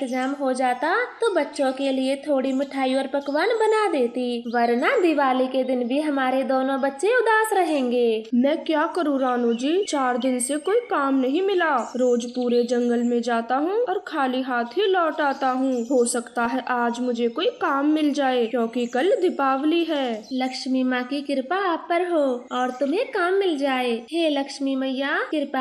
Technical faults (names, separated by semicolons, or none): MP2 compression